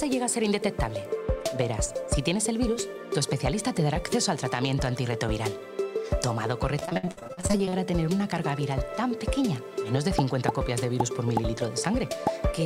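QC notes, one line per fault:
6.79–7.74 s, repeated packet loss (robotic sound): choppy stretch as dropouts up to 58 ms recur, nearly half the span patched by extending preceding sound.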